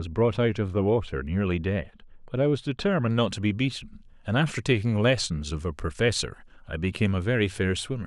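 From the start to 3.11 s the speech sounds dull and muffled, its treble rolled away. This is de-emphasis applied wrongly: a treble cut meant to reverse pre-emphasis hit audio that had none, or was applied twice, sloping smoothly down to about 13 dB below 1 kHz at 10 kHz.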